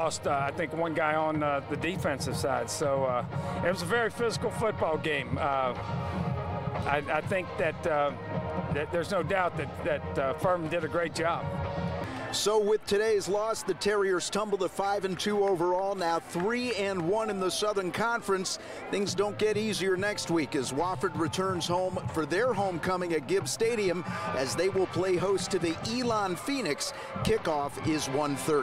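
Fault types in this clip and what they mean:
No technical faults can be heard anywhere in the clip. There are no dropouts, glitches or other disruptions to point to at any moment.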